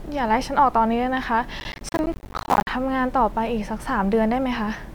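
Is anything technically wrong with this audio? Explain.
Yes. From about 1.6 to 2.69 s there's processor overload crackle: the machine kept missing its audio deadlines, dropping roughly seventy buffers of around 10 ms each to silence. Each hard-edged gap clicks, so the speech gets a gritty, tearing crackle that clears once the load eases.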